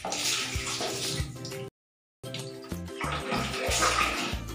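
At 1.68 s the sound just drops out to silence and picks back up at 2.24 s, right where it left off. That's a rebuffering stall: the player ran dry of downloaded audio and waited for more, so nothing's missing, just about 0.55 s of dead air added.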